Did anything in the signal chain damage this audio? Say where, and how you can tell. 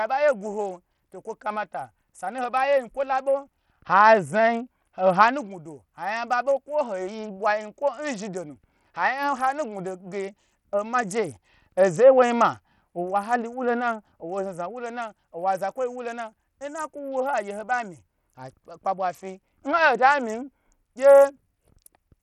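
Yes. The codec stage shows heavy damage throughout the speech, most likely Bluetooth SBC compression starved of bits, which fits a rate near 64 kbps. The upper sub-bands get almost nothing, so treble drops out and flickers, while coarse quantisation leaves gritty noise and aliasing riding on the sound.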